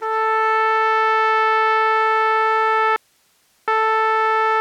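An audio dropout to a faint residue hits this music at 2.96–3.68 s: for 0.71 s only hiss remains, about 45 dB down, likely a brief signal loss on a still-live path.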